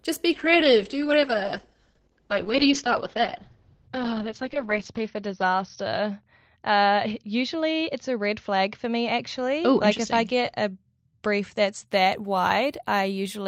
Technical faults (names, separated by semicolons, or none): call bitrate drop